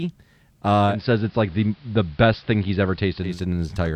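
From 0.86 s to 3.41 s the speech blends from digital radio to analogue AM: a 207 ms crossfade brings faint hiss, roughly 35 dB down, and treble cut.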